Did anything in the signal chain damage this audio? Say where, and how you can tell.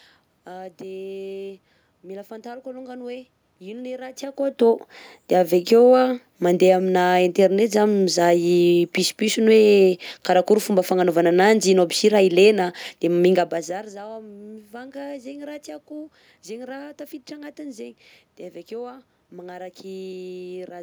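No, the signal chain caused nothing.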